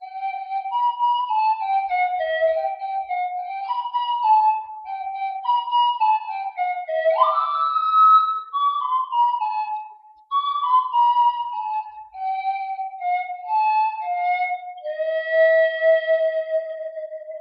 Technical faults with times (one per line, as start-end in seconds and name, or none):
none